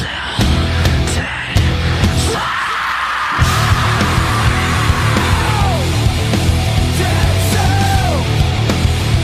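No technical faults are audible.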